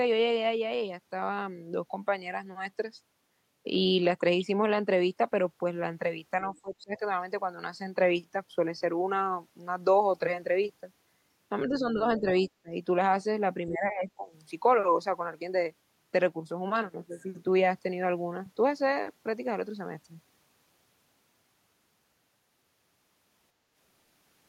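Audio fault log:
6.53–7.02 s, 11.68–12.0 s, 12.2 s, 12.63 s, 13.69–14.28 s, speech suppressed in double talk: the talker's level sinks by something like 10 to 25 dB in short bites, deepest near 6.5 s. This is likely an echo canceller unable to separate near speech from loudspeaker echo while both sides overlap.
6.56–6.6 s, other side's voice leaking through: a faint scrap of a second voice, roughly 35 dB below the talker, slips through for a few hundredths of a second, likely residual loudspeaker echo the canceller failed to remove from the microphone signal.
23.54–23.74 s, background gated by the echo canceller: the room sound dips by about 6 dB for a fifth of a second, then recovers. The canceller clamped the microphone down while the loudspeaker played and released it when it let go.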